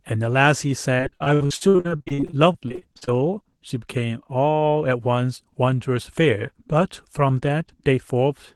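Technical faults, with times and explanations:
0.97–3.09 s, repeated packet loss (robotic sound): audio packets kept going missing or arriving too late across these two seconds, in nearly thirty separate holes, the longest 60 ms. Each time, the receiver filled the gap by stretching the last sound it had, so about a third of the stretch is patched-in audio. The speech turns choppy, with bits dropping out, over a call codec path that cuts off above 12 kHz.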